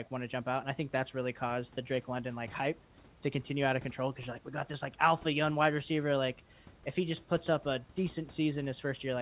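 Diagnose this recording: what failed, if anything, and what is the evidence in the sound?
Nothing failed; no stage of the chain shows faults.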